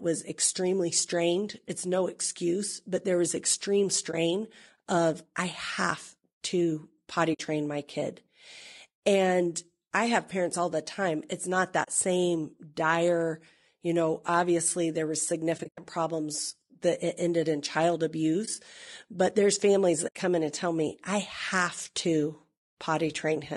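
From start to finish the speech is rough and grainy, with noise filling the gaps between harmonics and a thin, synthetic top band. This is likely low-delay AAC compression at 32 kbps, where short frames resolve pitch poorly, unlike ordinary AAC's pre-echo smearing.

AAC frame loss with muting then cuts brief dips and soft-edged holes: at 4.11 s after "but there was extreme" (20 ms), 7.33 s (60 ms), 11.83 s (40 ms), 15.57–15.78 s (scattered, longest run about 100 ms), 18.45 s after "it ended in child" (20 ms), and 20.07 s between "but there's families" and "come in and tell" (80 ms). The sound fades out and in, which separates it from hard dropouts.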